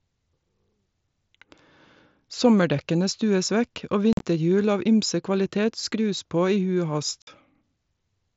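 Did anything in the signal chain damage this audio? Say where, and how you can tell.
Yes. Unconcealed Bluetooth headset packet loss on the headset-to-phone radio link: after "stues vekk og" at 4.13–4.22 s, and at 7.22–7.27 s, the speech breaks into abrupt silent gaps where lost packets went unfilled.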